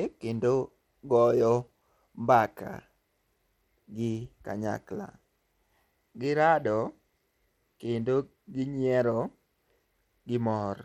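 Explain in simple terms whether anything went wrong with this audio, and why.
Bluetooth SBC compression damage runs through the whole clip: the speech has a gritty, fizzy edge and the highest sounds flicker or go missing. This is likely from a simple Bluetooth codec that splits sound into a few bands and starves the top ones of detail.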